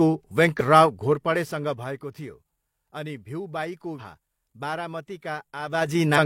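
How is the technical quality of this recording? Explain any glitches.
The recording has three short glitches from damaged data in a compressed stream, at 0.56–0.61 s, at 3.95–4.01 s just after "अनि भिउबाईको", and at 6.13–6.18 s. Corrupted bytes make the decoder misread those frames and lose sync while it hunts for the next frame header. Each one is a brief chirp or blip about 50 ms long in the speech.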